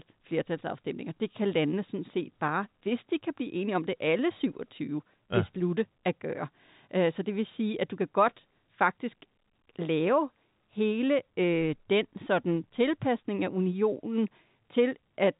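No technical faults can be heard in the speech. It carries the narrow band of G.711 telephone coding, with nothing above about 3.8 kHz and only a faint quantisation hiss riding under the voice.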